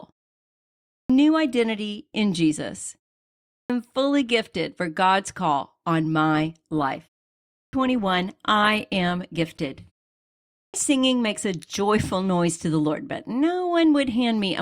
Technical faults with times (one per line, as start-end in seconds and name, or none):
0.87-1.10 clipped start after a pause
3.46-3.70 clipped start after a pause
6.34-10.34 adaptive stream at a lower bitrate
7.47-7.73 clipped start after a pause
10.51-10.74 clipped start after a pause